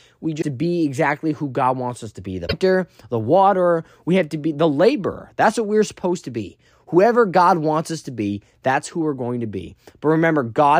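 At 0.38 to 0.43 s and again at 2.44 to 2.54 s, damaged data in the compressed stream makes the decoder misread frames and hunt for the next header, giving short glitches that show on a spectrogram and on the waveform as abrupt breaks.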